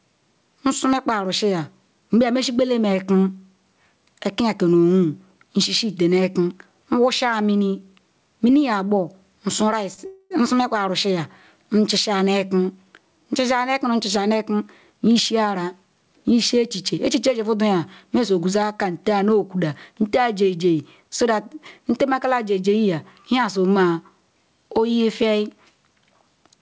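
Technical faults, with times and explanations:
Throughout, gain pumping: The level rides up and down, with swings of about 15 dB. The likely cause is a gain set far too high, with a fast limiter clamping every peak. Loud and soft passages end up squashed together.
9.94 to 10.00 s, short stall from a late packet: One sound is held slightly too long, with a slight buzz or dip. A packet arrived late, so the receiver stretched the last sound for about 36 ms until it came. Then playback resumed from the same point, and nothing is lost.
10.06 to 10.32 s, call audio freeze: The sound stops moving forward and turns into a fading buzz or hiss, ending in about 20 ms of silence. Packets were likely held up, so the receiver padded roughly a quarter second before resuming exactly where it stopped.
13.66 to 16.32 s and 21.01 to 21.86 s, jitter buffer speed-up: The audio runs about 7 percent fast in the first stretch and 6 percent in the second. 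The pitch stays the same, but the pace sounds hurried. Too much audio had built up, so the receiver cut many tiny pitch-period slices to catch up. That removes about a fifth of a second in the first stretch and a much smaller amount in the second.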